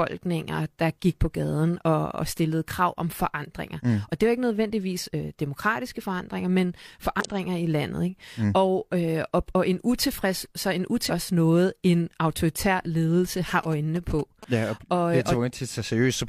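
Short glitches occur at 4.97 to 5.03 s after "det var ikke", at 7.20 to 7.26 s between "demokratiske forandringer men" and "i landet", and at 11.06 to 11.11 s. This is damaged data in a compressed stream: the decoder misreads the corrupted frames and jumps ahead to find the next frame header.

From 13.49 to 14.45 s, after "noget en autoritær ledelse", a galloping dit-dit-dit of short buzzes repeating at 217 Hz sits well below the speech. These are GSM signalling bursts, where a nearby phone's radio bursts are rectified by the audio circuit.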